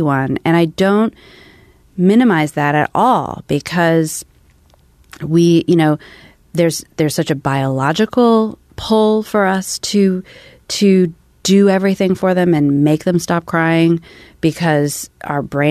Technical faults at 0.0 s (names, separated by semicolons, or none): none